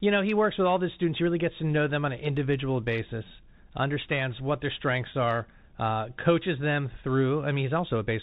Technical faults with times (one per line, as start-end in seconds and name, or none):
0.00-8.22 Bluetooth CVSD headset codec